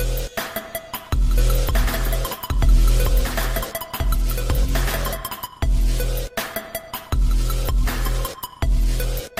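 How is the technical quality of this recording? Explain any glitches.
The recording has one clear fault. A doubled audio track runs from 1.38 s to 5.46 s. The likely cause is a second capture path or an edit mixing in an identical copy about one and a half seconds late, at roughly equal level. It sounds like a dry, full-band repeat with no room colour, and it starts and stops abruptly.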